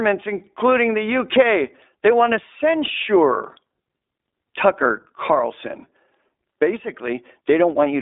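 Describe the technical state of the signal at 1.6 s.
At 1.6 s the speech is going through the iLBC codec, as it is across the whole clip. Each 20 ms frame is coded on its own, which fits the 15.2 kbps mode, so it sounds plainly rough and synthetic, band-limited to about 300 Hz–3.7 kHz.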